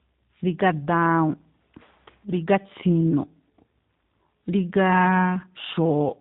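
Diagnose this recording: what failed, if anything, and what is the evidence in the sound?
The fault is at the codec stage: tandem speech coding across the whole clip, with the speech passing through two speech coders in sequence. The texture points to a CVSD link, then G.711 mu-law, then a G.729A leg, which fits 8 kbit/s. Nothing reaches above 3.8 kHz. Each coder re-models the previous one's errors, so the speech sounds rougher, more muffled and more warbly than any single narrowband codec would make it. That compounded roughness is what separates it from simple band-limiting.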